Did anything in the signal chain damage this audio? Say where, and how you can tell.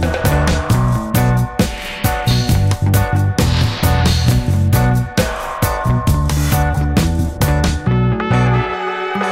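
No, no signal-chain damage heard.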